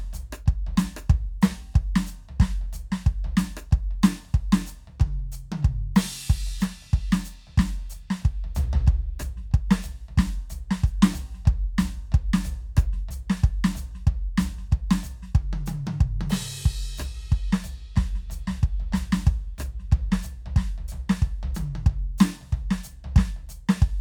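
No technical faults are audible anywhere in this music; nothing to report.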